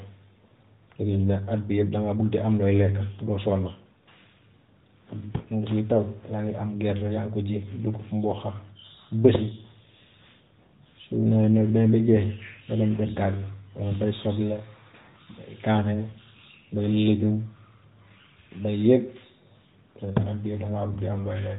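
Nothing stood out as a fault on listening to this speech recording.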